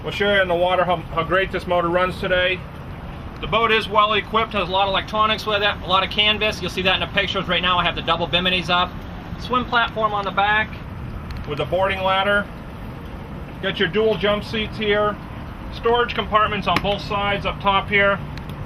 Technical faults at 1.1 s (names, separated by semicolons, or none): none